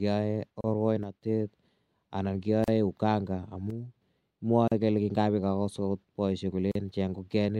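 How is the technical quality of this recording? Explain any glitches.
The speech has two recurring glitches: short silent gaps at regular joins, and two brief level drops.

Gaps at a join of encoded pieces occur at 0.61, 2.64, 4.68 and 6.72 s (the last right after "agot poishek"), every 2.0 s and about 31 to 38 ms long. Separately encoded pieces were joined untrimmed, leaving encoder start delay and end padding in place. The speech halts and resumes where it stopped. On a spectrogram these show as thin vertical blank strips with slightly smeared edges.

One channel drops out from 1.03 to 1.22 s and from 3.70 to 4.02 s. The sound falls abruptly by about 6 dB and then returns, likely because one stereo channel was lost before the mono sum. The waveform's envelope steps down and back up, and the spectrogram dims uniformly across all frequencies.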